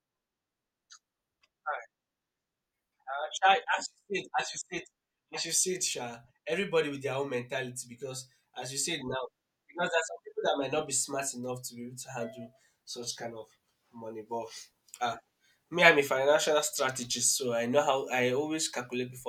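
Nothing goes wrong anywhere in this recording of speech, so there are no technical faults to point out along the way.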